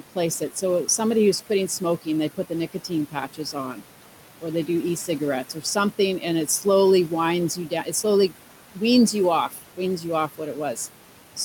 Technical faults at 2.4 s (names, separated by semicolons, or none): noise suppressor artifacts